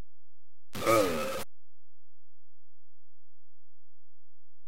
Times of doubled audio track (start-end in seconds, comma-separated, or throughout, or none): none